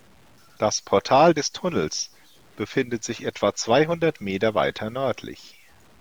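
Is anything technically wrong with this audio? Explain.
Yes, there's a problem across the whole speech clip: low bit depth without dither. Quiet stretches sound grainy, with a gritty distortion that tracks the voice and sits roughly 35 dB under it. That's likely truncation to about 9 bits with no dither, so the rounding error follows the signal.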